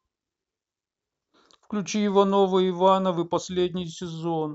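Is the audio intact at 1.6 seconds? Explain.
Yes, the speech at 1.6 seconds plays through cleanly, with no dropout, click, distortion or other fault at that moment.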